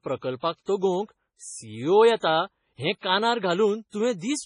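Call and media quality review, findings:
Watery, swirly speech throughout, treble gone above 10.5 kHz; likely MP3 compression, heavy damage consistent with roughly 24 kbps, weak bands toggling frame to frame, s sounds chirping.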